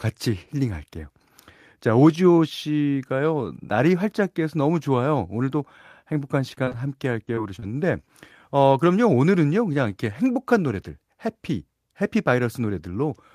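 Choppy, robotic speech from 6.49 to 6.81 s and again from 7.25 to 7.64 s: repeated packet loss, with each brief hole of up to about 24 ms patched by stretching the preceding sound.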